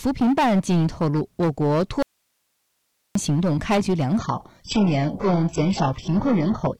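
A speech recording with three technical faults. Hard clipping runs through the whole clip: the signal is driven about 11 dB beyond what one stage in the chain can pass, so every peak is sliced flat, with around a sixth of all samples pinned at the ceiling. It is heard as a harsh, fuzzy edge on every louder syllable. On a waveform the peaks look squared off into a dense flat-topped band, and a spectrogram shows smeared harmonic energy reaching far up the spectrum. From 2.03 s to 3.15 s the sound abruptly drops away for about 1.13 s, leaving only hiss roughly 50 dB below the speech level, then cuts straight back in. This is most likely an audio dropout to a faint residue, where the incoming signal was lost while the path after the break stayed live and kept passing its own noise floor. The waveform collapses to a thin flat line with sharp edges at both ends, and the spectrogram shows a low, even noise wash instead of a fade. 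From 4.19 s to the end, the sound suddenly turns dull without any gap, with nothing above 8 kHz. This points to an adaptive stream at a lower bitrate, consistent with a switch from a 96 kbit/s AAC version to a very low-rate HE-AAC version of around 8 kbit/s. On a spectrogram this appears as a hard horizontal cut-off at 8 kHz starting at that moment, with blocky, patchy texture below it.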